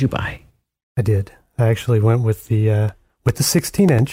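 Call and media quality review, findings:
Periodic USB or driver dropouts, 2.89–4.09 s. Regular ticks in the speech, every 0.1 s, around fifteen in all. Each is a short gap of about 2 ms, filled with silence. Points to a USB bus or audio driver being blocked at a fixed interval.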